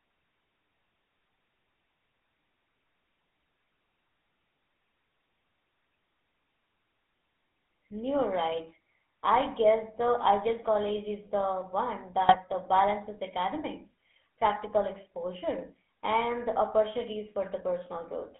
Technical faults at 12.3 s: GSM full-rate codec; GSM bit errors

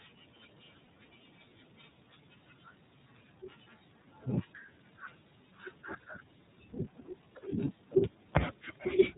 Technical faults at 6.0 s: iLBC codec; lost iLBC frames

